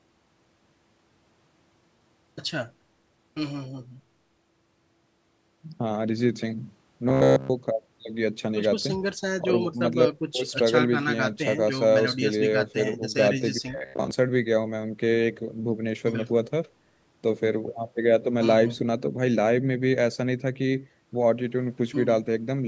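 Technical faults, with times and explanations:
7.09–7.50 s and 13.71–14.11 s, robotic sound from repeated short buffers: the speech becomes a rigid, metallic 66.8 Hz buzz, likely from a roughly 15 ms chunk looping while incoming audio is skipped.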